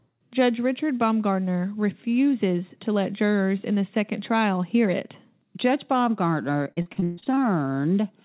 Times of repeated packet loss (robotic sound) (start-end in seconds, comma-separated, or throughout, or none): 6.64-7.39